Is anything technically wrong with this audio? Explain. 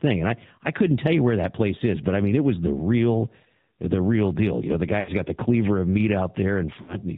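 Yes. Throughout, the AMR narrowband mobile codec is audible. Its low-bitrate vocal-tract model, which fits about 7.4 kbps, makes the speech buzzy and synthetic. A spectrogram shows a hard ceiling at 4 kHz.

There are lost AMR speech frames between "know the" and "got the cleaver of" (4.99–5.11 s), and again at 6.82–6.96 s. In each gap the decoder repeated its last pitch and vocal-tract settings at falling gain, which fits three or four missing 20 ms frames. The sound is drawn out and fading, seen as a shrinking waveform envelope with smeared, flat harmonics.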